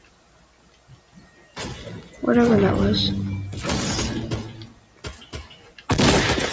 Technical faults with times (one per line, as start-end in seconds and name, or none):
0.00-6.52 low bit depth with dither
0.00-6.52 noise suppressor applied to music or sounds
0.00-1.57 sound cut by the noise suppressor
2.02-2.22 sound cut by the noise suppressor
4.52-5.89 sound cut by the noise suppressor